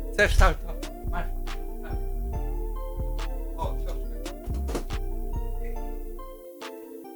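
Throughout, low bit depth with noise shaping. The audio sits at 10 bits, with rounding error pushed upward, giving a thin hiss, about 25 dB down, climbing toward the top.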